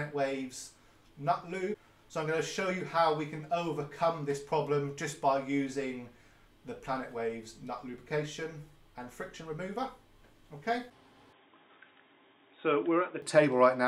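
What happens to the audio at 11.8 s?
At 11.8 s the sound sits inside a stretch from 11.33 to 13.22 s where it turns dull and boxy, with nothing above 3.8 kHz, then clears again. This points to the input switched to a poorer device, likely a second microphone or a headset call profile. The change is instant, with no silence at either switch and no real jump in loudness. What sets it apart from a simple low-pass filter or codec bandwidth drop is the change in character: a different tonal colour and a faint new noise floor, far below the signal.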